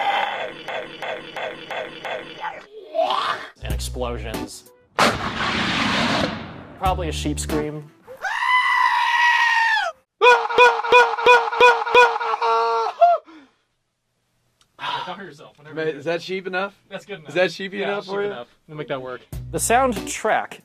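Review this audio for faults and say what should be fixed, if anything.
System hang loop at 0.68 to 2.39 s and again at 10.58 to 12.29 s. In each case the playback machinery stalled while the output hardware kept replaying its ring buffer, so one 341 ms slice of sound repeats five times at about 2.93 Hz. That produces a slow, rhythmic machine-gun stutter rather than a buzz. The loop length fits a 16384-sample buffer at 48 kHz, and essentially nothing is skipped once playback resumes. To prevent it, keep the audio thread from blocking, and have the driver mute or zero the buffer when the host stops supplying new data.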